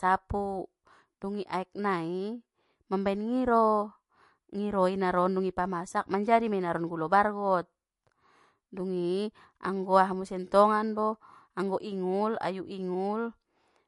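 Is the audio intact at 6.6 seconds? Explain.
No. At 6.6 seconds, as across the whole clip, the speech carries plainly audible damage, most likely from MP3 compression. Nothing sounds above about 11.3 kHz, and the sound fits a low bitrate near 48 kbps. With so few bits, the encoder chops off the treble and drops weak frequency components that flicker in and out between frames. That flicker gives a watery, swirly texture and smeared consonant attacks. A plain low-pass filter would remove the top end cleanly without that warbling.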